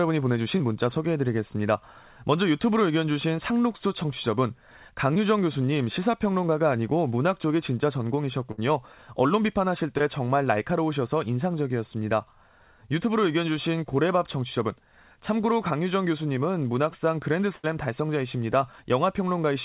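Short concealed packet loss occurs at 0.58, 3.77 and 5.14 s. About 20 ms of audio never reached the decoder in time, so the receiver extended the preceding sound, leaving a brief smear or wobble. From 8.51 to 8.60 s, a burst of packet loss removes about 60 ms. The last sound is continued and faded into a held buzz or hiss, then the audio resumes further on. Another short concealed loss follows at 9.98 s, and a second burst from 17.56 to 17.65 s drops about 80 ms the same way. Through the G.711 A-law call path, nothing above 4 kHz comes through.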